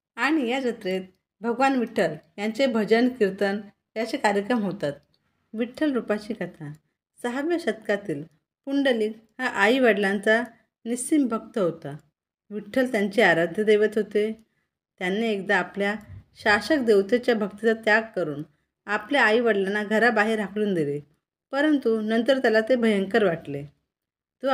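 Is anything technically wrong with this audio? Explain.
No, nothing technically wrong can be heard in this audio. It holds steady throughout, with no audible problem at any point.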